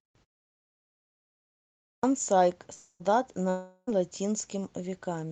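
A speech clip with two kinds of trouble. First, a clipped start after a pause: after about 1.74 s of silence, the speech at 1.91 s comes in abruptly with roughly 0.12 s of its onset swallowed while the output device wakes back up. Then there's what sounds like a long network dropout, twice: at 2.73 to 3.02 s and again at 3.50 to 3.89 s, the last sound smears into a fading buzz before the speech resumes, missing about 0.26 s and 0.38 s respectively. The Opus call path tops out around 12 kHz.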